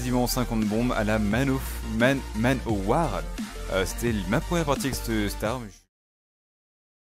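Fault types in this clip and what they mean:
No technical faults can be heard anywhere in this audio.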